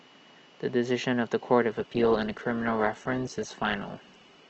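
From 1.70 s to the end, an adaptive stream at a lower bitrate takes over. The treble abruptly thins, and codec artefacts rise, with no gap. A spectrogram shows the high band cut sharply, which fits a drop from about 64 to 12 kbit/s.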